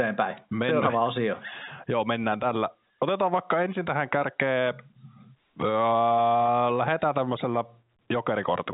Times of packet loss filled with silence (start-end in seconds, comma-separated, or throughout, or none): none